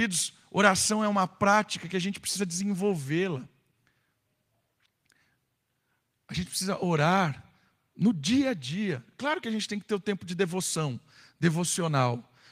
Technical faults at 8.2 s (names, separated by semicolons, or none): none